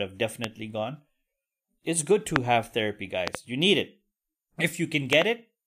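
A speech recording marred by four loud pops: single ones at 0.44–0.46 s and 2.36–2.38 s (between "it's good" and "have therapy"), and double ones at 3.28–3.37 s (between "have therapy" and "you need") and 5.13–5.24 s. Each stands around 20 to 25 dB above the speech, which continues underneath. A likely electrical transient, such as a switch, static or driver glitch, is the cause. The waveform shows sharp spikes, and the spectrogram shows thin full-band vertical lines.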